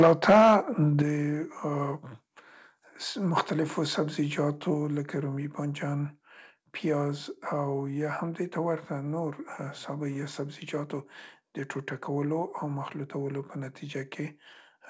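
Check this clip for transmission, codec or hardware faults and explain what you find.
Two hardware-side faults appear, both near the start, while the G.722 call path's 8 kHz upper limit is simply its normal bandwidth.

From 0.0 to 0.56 s there is microphone overload, likely from input gain set too high. Peaks run about 6 dB past the converter's ceiling, flattening roughly a tenth of samples into a harsh crackle. Unlike codec distortion, this crackle follows loudness.

At 0.02 s and 1.02 s the microphone volume is stepped down, by about 4 dB and then about 8 dB. Software likely reacted to the clipping. These are instant drops affecting speech and background equally, not a gradual fade.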